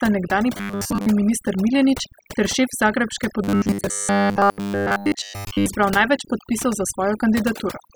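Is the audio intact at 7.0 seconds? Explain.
No. At 7.0 seconds the speech carries overdone noise removal throughout the clip: an over-aggressive noise reducer mutes bands near its noise estimate, leaving twinkling specks.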